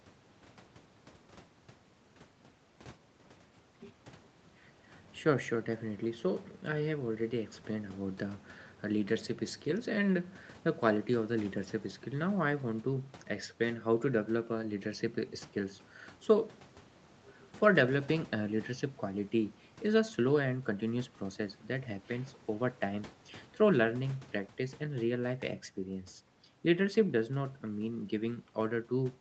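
No technical faults can be heard anywhere in the speech. It carries the ordinary sound of a call path, with nothing above 8 kHz, which fits an Opus codec set to an 8 kHz bandwidth, and the lowest bass trimmed by the microphone processing's high-pass filter.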